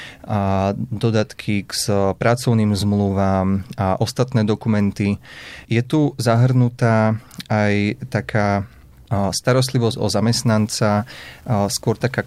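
From 10.45 s to 12.26 s, the speech was likely requantised to low bit depth without dither, which fits 8-bit rounding. The rounding error follows the signal, so grainy distortion about 35 dB below it rides on the sound and makes quiet passages gritty.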